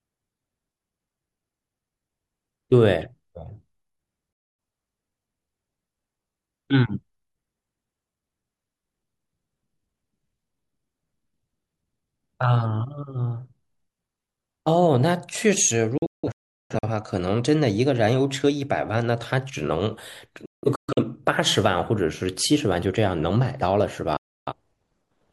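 You get four digital broadcast dropouts in this speech. The receiver loses good frames and mutes, so the sound snaps to silence with a fade of only about 3 ms and comes back further along, with the missing stretch simply gone. At 4.33 s there's a single hole of about a quarter second. From 15.98 to 16.88 s it stutters through several gaps, the longest about 0.38 s. From 20.46 to 21.03 s it's choppy again, with gaps up to about 0.17 s. At 24.17 s a single gap lasts about 0.3 s.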